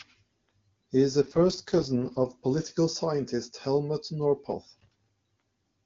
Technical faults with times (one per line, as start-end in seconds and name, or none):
1.22-2.26 AMR rate drop